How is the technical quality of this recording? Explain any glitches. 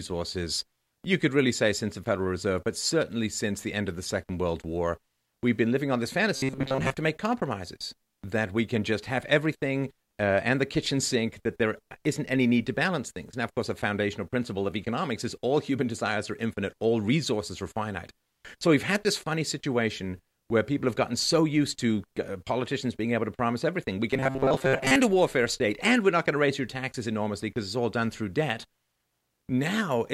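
The recording has two short glitches of the same kind, robotic sound from repeated short buffers. From 6.35 to 6.94 s, between "been living on this" and "to make compromises that", and again from 24.11 to 24.96 s, just before "a warfare state and", the speech becomes a rigid metallic buzz near 133 Hz. The likely cause is audio arriving too slowly, so roughly a 7.5 ms slice is looped in place of most of the real signal.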